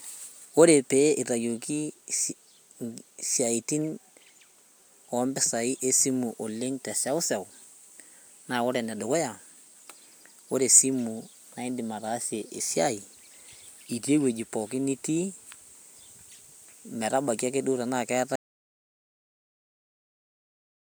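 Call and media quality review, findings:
Audio dropout to silence, 18.36 s to end of speech clip (about 2.5 s). Sound cuts off mid-flow into silence, no room tone. Likely input loss at capture device or link; recorder kept writing silence. Content in gap unrecoverable.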